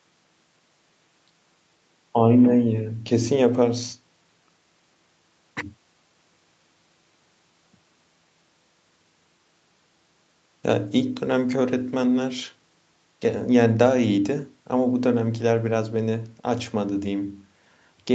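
No faults in the speech; the band stops at 8 kHz and the lowest bass is trimmed, consistent with normal call microphone processing and a WebRTC call path with a wideband codec such as Opus.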